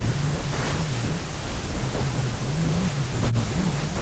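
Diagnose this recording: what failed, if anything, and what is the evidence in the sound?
Speech suppressed in double talk, at the call processing stage. From 0.0 to 1.21 s, and again from 1.79 s to the end, the speech dips by up to about 25 dB. In the first span that lasts roughly a second. The echo canceller likely could not separate the talker from loudspeaker echo while both sides spoke, so it turned both down.

Echo leak, also in call processing. Between 1.23 and 1.34 s, a short delayed copy of the speech comes through. It trails the original by 187 ms and sits about 15 dB below it. This is likely loudspeaker pickup that the far end's echo canceller failed to remove and sent back.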